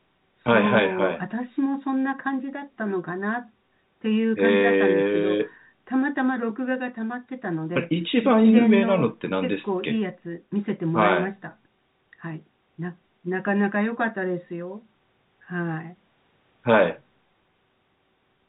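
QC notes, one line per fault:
No faults found; the speech sits in the narrow band of a call, with nothing above 4 kHz, which points to a G.711 mu-law codec at 64 kbps.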